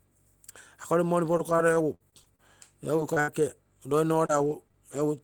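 From 1.33 s to 4.98 s, packets keep arriving late or not at all. This is repeated packet loss, heard as robotic sound. The decoder covers each hole by extending the last stretch of sound, and thirteen such gaps follow closely on one another, the longest about 75 ms. Around 360 ms goes missing and roughly 400 ms is rebuilt, and about 9% of the span is concealed. The speech turns choppy, with small pieces dropped out.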